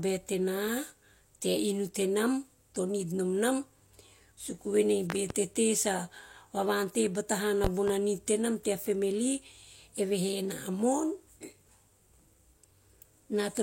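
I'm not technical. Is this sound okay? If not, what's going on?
No. The speech has two loud pops, each a quick double pop. The first runs from 5.10 to 5.34 seconds, just before "tete sa". The second runs from 7.64 to 7.91 seconds, just before "nid tenam tea family". Each pop is much louder than the speech. The talking carries on underneath them. A sudden electrical jolt was likely added to the signal, perhaps from a plug, a switch, static or a device glitch.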